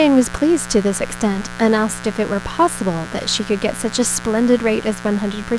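From start to finish there's mains buzz under the speech, a steady raspy drone built on 60 Hz. Switching spikes twice per cycle leaked in, so its harmonics climb into the kilohertz range, and it sits fairly loud, not far beneath the talker.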